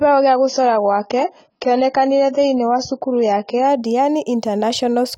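Speech that opens dull and smeary, with nothing above 7 kHz, until about 3.68 s, when it suddenly brightens without a gap: an adaptive stream starting at a low bitrate, roughly 16 kbit/s stepping up to 96.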